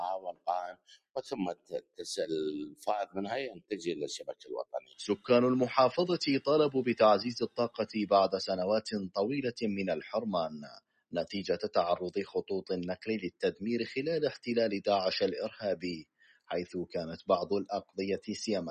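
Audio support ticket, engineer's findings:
Noise suppressor applied to music or sounds, whole clip. Level swings of around 10 dB as steady tones, ambience and reverb get treated as noise. Attacks pass, sustains sink, giving pumping and thinning. Unlike compressor pumping, dips follow steadiness, not loud transients.

Sound cut by the noise suppressor at 0.19–2.05, 2.66–3.17, 3.49–3.86, 4.19–5.3, 7.46–7.83, 10.5–11.14, 13.0–13.62 and 16.02–16.5 s. Held and fading parts drop by up to about 20 dB, with decays clipped short. Onsets survive, so this is not dropouts or a hard gate.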